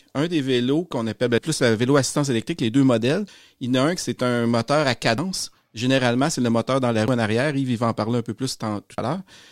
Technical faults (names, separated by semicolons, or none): audio missing between chunks